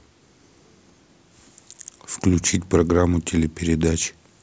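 No technical faults can be heard anywhere here.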